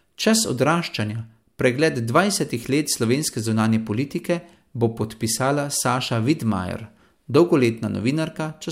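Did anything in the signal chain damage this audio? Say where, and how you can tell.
No, nothing in the signal chain has left an audible mark on this speech recording. I can't point to any stage or moment where the signal has been disturbed.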